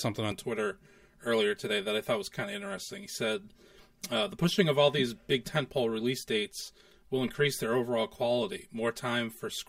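From about 0.32 s to the end, the speech has channel delay, heard as comb filtering. One channel runs late by around 5 ms, and the two are folded to mono. The parts they share cancel at evenly spaced frequencies. The first notch sits near 100 Hz, and further notches repeat up the spectrum. The speech sounds hollow and phasey, as if heard down a tube. The notches stay fixed throughout.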